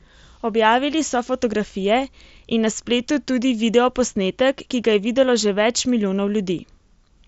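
No technical faults are audible.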